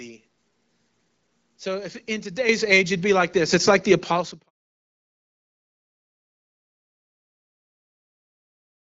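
At 2.49 s the speech and the background jump up in level together by about 9 dB, then again at 3.51 s by about 5 dB and at 4.53 s by about 2 dB. That's the microphone volume stepped up: the call software judged the input too quiet and raised the device gain in a single step each time, so everything lurches louder at once, with each step smaller than the last. The final one lands just after the smooth fade-out that runs from about 4 s to 4.51 s.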